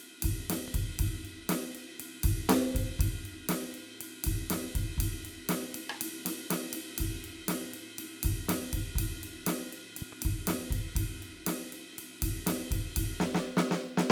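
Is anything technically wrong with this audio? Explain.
Yes, the music carries two loud pops. A single sharp pop lands at about 0.68 to 0.70 s, and a double pop, two hits in quick succession, follows at about 10.02 to 10.15 s. Each peaks roughly 5 dB above the music, which plays on unbroken underneath. The likely cause is a sudden voltage step or pulse, from a plug, switch, static discharge or driver glitch, added to the signal and shaped by the downstream circuitry into a brief thump.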